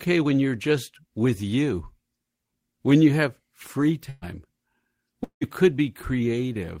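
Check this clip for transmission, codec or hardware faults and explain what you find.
Two transmission faults appear, both network losses in the speech.

From 4.09 to 4.25 s, the last sound is held and fades out, and the speech resumes further on. This is a burst of packet loss: about 120 ms missing, concealed by extending the last sound.

From 5.24 to 5.44 s, the last sound is held and fades, giving way to about 110 ms of silence, then speech returns without the lost part. This is likely a long network dropout, with about 180 ms missing.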